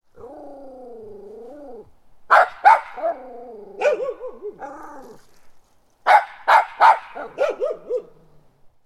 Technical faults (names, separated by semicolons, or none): none